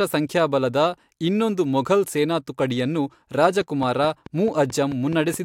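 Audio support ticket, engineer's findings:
Train of clicks, 3.61–5.35 s: likely interference from nearby equipment or a faulty connection or power supply injecting repeated pulses. Regular ticking at about 4.6 per second, around ten similar clicks, peaking roughly level with the speech, audible over it and in pauses.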